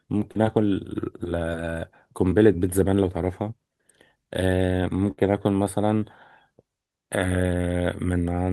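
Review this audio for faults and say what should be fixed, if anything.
Short concealed packet loss at 0.31 to 0.37 s and again at 2.29 to 2.33 s. About 40 ms of audio failed to reach the decoder in time at the first spot and 20 ms at the second. Each time the receiver patched the hole by extending the preceding sound for roughly 35 ms and 21 ms, then crossfaded back into the real stream. The result is a quick smear or wobble in the speech, and any brief consonant in those gaps can drop out.

Burst of packet loss at 5.11 to 5.19 s. Here about 60 ms went missing in a row, too long to cover cleanly. The receiver carried the last sound forward for around 59 ms while fading it down, so it comes across as a short held buzz or decaying hiss. The speech then picks up a little further on, and whatever fell inside that stretch is simply gone.

To prevent these, give the call a more generous jitter buffer and enable forward error correction or redundancy so that lost packets can be rebuilt rather than guessed.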